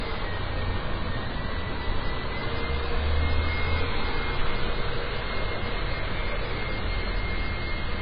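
AAC compression damage runs through the whole clip, from 0 s to the end. Nothing survives above 5 kHz, and the sound is dull and smeared, with a warbling, fizzy texture. That heavy damage is likely from AAC-LC at a very low bitrate, around 16 kbps.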